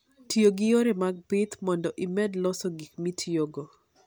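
A speech recording whose signal shows no technical fault at any point.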